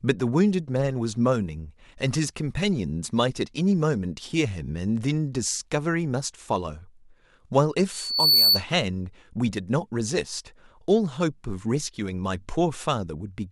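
From 7.91 to 8.64 s, a loudspeaker feedback squeal breaks into the speech. The microphone is re-amplifying its own loudspeaker, and the loop gain passes unity at 4.5 kHz. That tone swells over roughly 0.4 s to about 10 dB above the speech.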